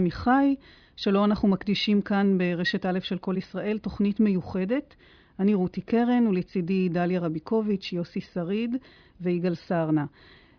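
Speech, with nothing technically wrong to point to at any time.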